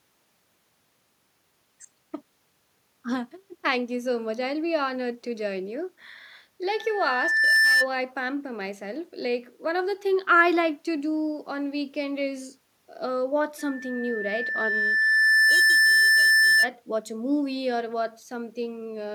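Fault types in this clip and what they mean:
Loudspeaker feedback squeal: the mic hears its own speaker, and at 1.8 kHz the loop gain tips past one, so that tone feeds itself. It swells over a second or two to about 10 dB over the speech, at 6.7–7.9 s and 13.6–16.7 s.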